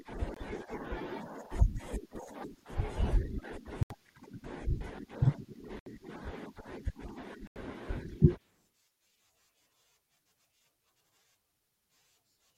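Speech cuts to silence at 0.34, 3.83, 5.79 and 7.47 s for 23 to 86 ms each: likely Bluetooth stalls, with the headphone buffer running dry.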